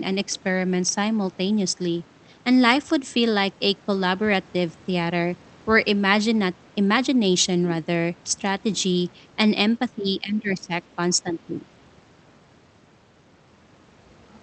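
Speech suppressed in double talk dips the level about 20 dB at 9.95–10.71 s and slightly at 11.16–11.6 s, likely echo-canceller ducking; the waveform visibly narrows.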